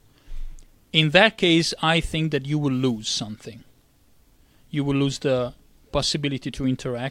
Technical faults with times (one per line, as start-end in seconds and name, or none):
none